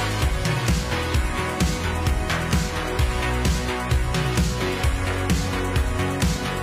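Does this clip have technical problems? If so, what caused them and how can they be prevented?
No, there are no audible technical faults here, so no cause to trace and nothing to prevent.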